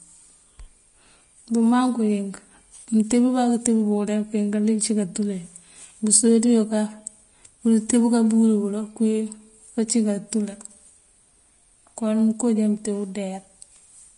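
From start to finish, the speech has a hard ceiling at 10.5 kHz. The top end sounds hissy and grainy, and consonant onsets are smeared. This is likely Vorbis compression at a low setting, which fits roughly 33 kbps. The coarse quantisation turns fine treble detail into noise.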